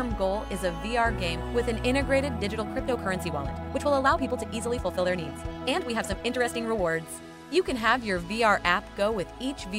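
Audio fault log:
2.35–6.91 s, time-stretched section: software likely compressed this stretch to play about 1.43 times faster while holding pitch, dropping short slices of the waveform to fit. The pace jumps abruptly at both edges, and the sped-up passage sounds rushed at unchanged pitch.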